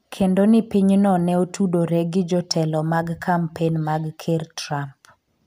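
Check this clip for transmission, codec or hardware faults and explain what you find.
One hardware fault is present: sample clock jitter. It begins at about 2.17 s, just after "piny no ne otudore", and runs to the end of the clip. The converter's clock wanders, so samples land slightly early or late. Fast-changing parts of the speech waveform take the largest errors. The timing spread is around a microsecond and a half, leaving error noise roughly 35 dB below the speech. It is heard as a fine hiss or grit on louder, brighter sounds. It disappears in the pauses.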